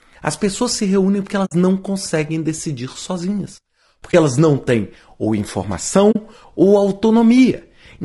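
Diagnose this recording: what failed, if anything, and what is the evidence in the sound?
The codec stage: the speech is rough and grainy throughout, with noise between harmonics. That's likely low-delay AAC compression (AAC-ELD), and the damage fits roughly 32 kbps.

Also at the codec, AAC frame loss with muting: soft-edged dropouts at 1.45–1.52 s (after "pessoas se reúnem porque"), 4.11–4.14 s (before "elas não têm ou") and 6.11–6.16 s, where zeroed frames fade out and back in.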